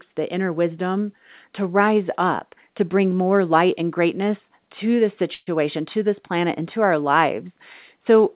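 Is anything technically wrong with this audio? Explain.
Yes. At 5.34 s, right after "and greatness to this", the speech stops moving forward for about 0.15 s. For roughly 126 ms the last sound is stretched into a fading buzzy hiss, ending in about 20 ms of silence, and then the speech resumes with "to this planet and" exactly where it left off, 126 ms late with nothing lost. This is a call audio freeze, likely from packets arriving late and the jitter buffer running dry, so the receiver padded the gap. The whole clip is also band-limited with nothing above 4 kHz, which fits a narrowband call codec such as G.711.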